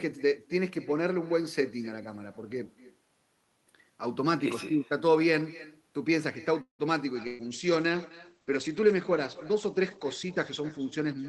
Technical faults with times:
0.00-11.29 echo with no canceller
6.61-6.82 call audio freeze
7.18-11.29 call bitrate drop
7.27-7.42 burst of packet loss

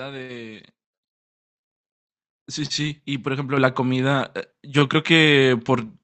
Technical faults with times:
1.02 microphone volume stepped up
3.57 microphone volume stepped up
4.59 microphone volume stepped up

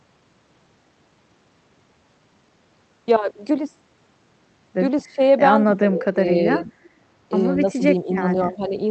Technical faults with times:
5.04-5.20 speech suppressed in double talk
5.67-6.24 speech suppressed in double talk
6.63-6.74 speech suppressed in double talk
7.67-8.74 speech suppressed in double talk

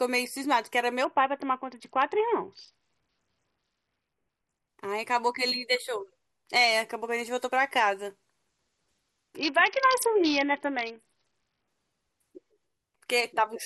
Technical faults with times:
1.05-4.69 Bluetooth SBC bit pool drop
9.37-11.68 Bluetooth SBC bit pool drop

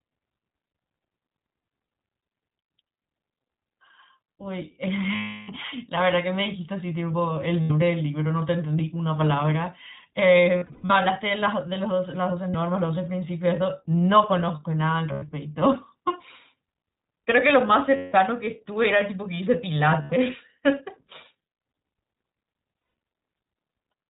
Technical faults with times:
0.00-24.09 iLBC codec
5.16-5.50 lost iLBC frames
7.63-7.71 lost iLBC frames
10.58-10.95 lost iLBC frames
12.50-12.55 lost iLBC frames
15.12-15.25 lost iLBC frames
17.96-18.15 lost iLBC frames
20.02-20.14 lost iLBC frames
22.80-22.93 lost iLBC frames

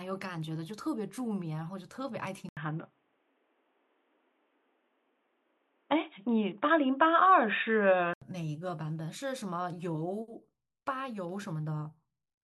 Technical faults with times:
2.49-8.22 input switched to a poorer device

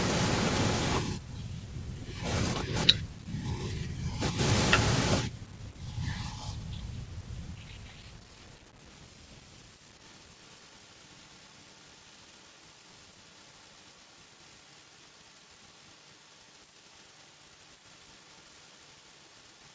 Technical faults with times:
8.68-9.04 echo leak
9.94-19.75 echo leak

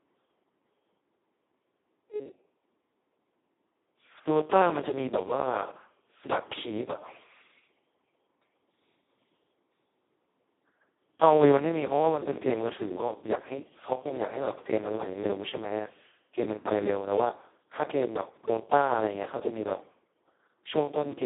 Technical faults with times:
0.00-21.25 Speex codec

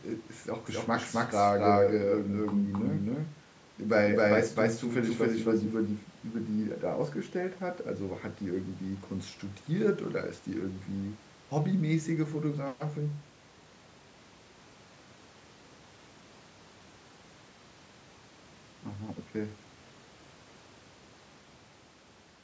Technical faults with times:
0.66-6.04 doubled audio track

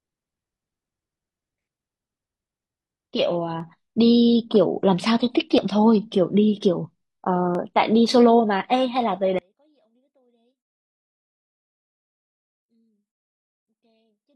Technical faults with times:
1.58-1.61 overlap between stream segments
3.60-3.63 overlap between stream segments
5.58 overlap between stream segments
7.55-7.59 overlap between stream segments
9.39-14.35 one channel inverted

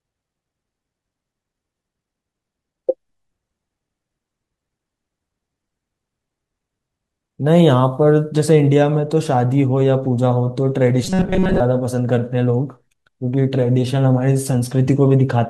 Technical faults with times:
11.05-11.60 robotic sound from repeated short buffers

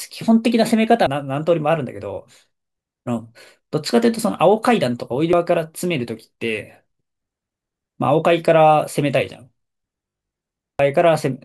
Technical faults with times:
1.07 damaged data in a compressed stream
5.33 damaged data in a compressed stream
10.09-10.57 robotic sound from repeated short buffers
10.79 damaged data in a compressed stream

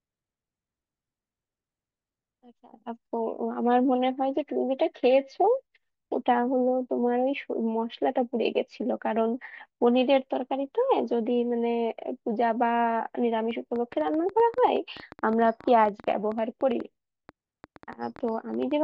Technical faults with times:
13.51-18.72 train of clicks

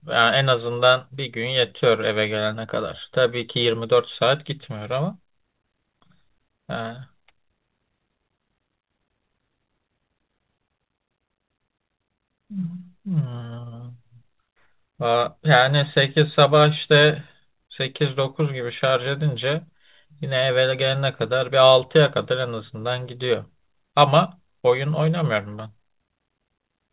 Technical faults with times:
none

